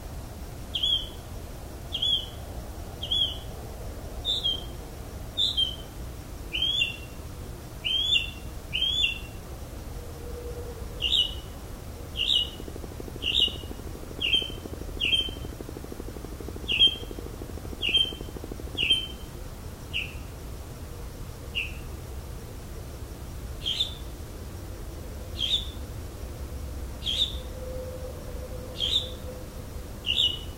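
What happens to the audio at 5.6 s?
Nothing goes wrong at 5.6 s: the audio carries on intact through that moment, with no dropout, glitch or other audible fault.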